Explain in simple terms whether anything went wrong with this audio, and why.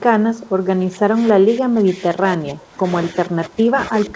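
Between 0.34 and 0.5 s, a faint delayed copy of the speech returns about 0.29 s after the original. This is an echo leak. The likely cause is a loudspeaker on the far end whose echo canceller failed to remove its own playback before sending audio back.

From 0.84 to 2.84 s and again from 3.12 s to the end, the speech drops noticeably in level. This is speech suppressed in double talk. The echo canceller likely could not separate this talker from the other side's echo and turned everything down.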